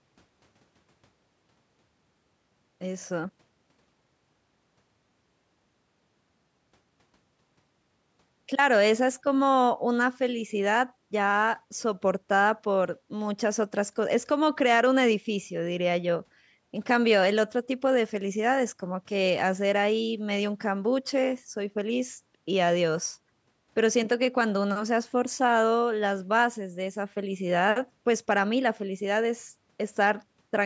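No technical faults can be heard anywhere in the speech. It has passed through a call's microphone processing, which trims away the lowest bass and leaves nothing above 8 kHz, as expected for that path.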